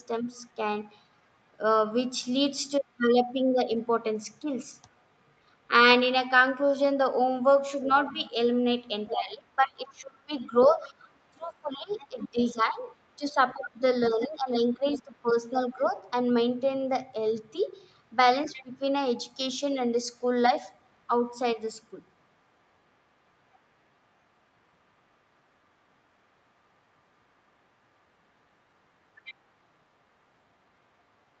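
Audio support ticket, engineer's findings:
Other side's voice leaking through: second voice audible under the talker at 4.91–5.03, 7.82–13.15, 14.2–15.84, 18.44–18.63, 23.53–23.59 and 29.15–29.34 s, roughly 20–40 dB down. Likely residual loudspeaker echo the canceller missed. Added voice, not a level change.

Speech suppressed in double talk: talker's own level dips, by up to about 20 dB, across 7.87–15.96 s (about 4 s affected in total) and briefly at 18.54–18.75 s, both during far-end talk. Likely the echo canceller turning down the near end. Near-end loss, not added sound.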